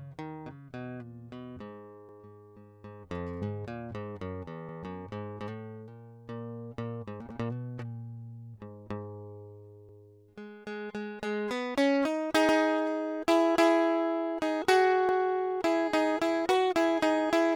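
It's a music clip with overlapping chunks: at 2.09, 4.69, 7.29, 9.89, 12.49 and 15.09 s you get a little stutter where about 100 ms of the music plays twice. That happens when the audio is handled in 2.5 s blocks and each new block starts before the previous one has finished, so the tail gets repeated at every join. Because the doubled bit adds to the spacing, the hiccups land every 2.6 s.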